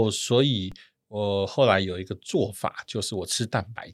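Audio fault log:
0.72 s: DC step. The waveform's zero line jumps by about -30 dBFS, then decays through a 20 Hz high-pass, heard as a single low thump.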